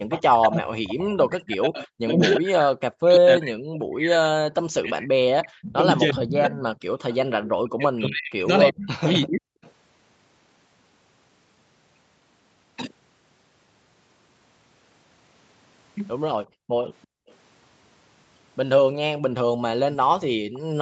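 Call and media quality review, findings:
Speech suppressed in double talk, 0.0–6.64 s: talker level pumps down by roughly 40 dB in pieces, about 5 s affected in total. Likely the talker's own echo canceller misreading overlap with loudspeaker playback as echo and attenuating both. Second occurrence 7.55–9.53 s, same behaviour, about 1.5 s of dips.

Echo leak: delayed copy of the voice at 344 ms lag, residual not cancelled. Occurrences: 0.1–0.22 s at about −10 dB, 6.09–7.49 s at about −20 dB, 9.11–9.71 s at about −30 dB, 17.02–17.31 s at about −35 dB, 20.53–20.59 s at about −30 dB relative to speech. Likely a loudspeaker endpoint whose echo canceller did not remove all of its microphone pickup. The constant delay points to a fixed acoustic and network path.

Background gated by the echo canceller, 16.47–17.29 s: room tone drops by about 38 dB for roughly 0.5 s, then recovers. The canceller clamps the microphone hard during loudspeaker playback. 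The dip overlaps the echo scrap at 17.02 s. Band tops out at 8 kHz throughout, consistent with the call path.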